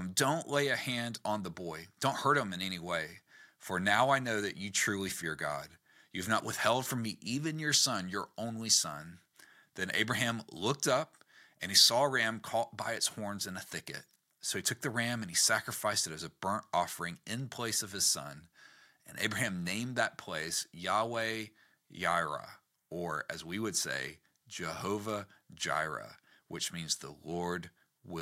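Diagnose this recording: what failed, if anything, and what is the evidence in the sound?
Nothing stood out on listening to this speech recording that would point to a failure at any stage of the chain.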